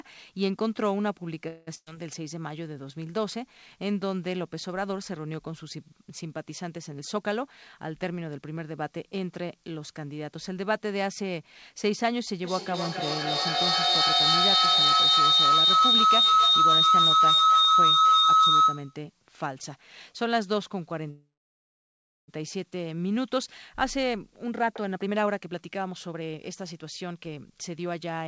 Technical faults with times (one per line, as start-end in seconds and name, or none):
1.48-1.69 call audio freeze
1.75-1.88 burst of packet loss
6.98-8.57 jitter buffer speed-up
12.44-19.03 feedback howl
21.10-22.30 call audio freeze
23.16-28.21 jitter buffer speed-up